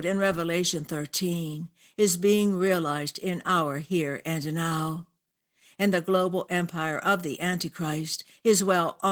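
Throughout this speech recording, Opus voice compression is plainly audible. The voice has the hoarse, slightly robotic grain of a linear-prediction coder whose excitation is quantised coarsely. The top of the band is still present, which points to hybrid operation, with a CELT layer above 8 kHz, at a low rate of around 16 kbps. A simple low-pass would muffle the voice without adding grit, and MP3-style damage would swirl. This roughness instead follows the voice itself, coded in 20 ms frames.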